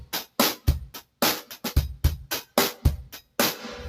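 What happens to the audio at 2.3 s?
At 2.3 s the sound is still under the noise suppressor applied to music or sounds, which runs through the whole clip rather than starting or stopping there. A suppressor tuned for speech reads sustained tones, ambience and decay as noise and pulls them down, while onsets pass. Level therefore swings by roughly five decibels as the gain rides up and down, so held material and tails dip and the sound pumps and thins.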